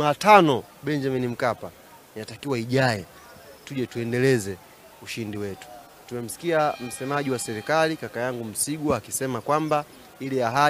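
Nothing here sounds like a technical fault, so there's really nothing to flag.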